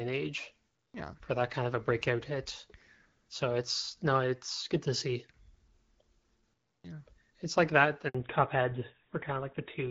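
At 8.09 to 8.15 s, right after "like that", a handover gap leaves 60 ms of true silence as the call switches networks. It is a clean dropout, not the smeared repetition of packet-loss concealment.

From 8.15 s to the end, a fallback to narrowband removes everything above 4 kHz. The sound points to a move from HD Voice to a GSM-style full-rate codec. Unlike a simple low-pass filter, it begins exactly at the gap and also adds a duller, rougher coding texture.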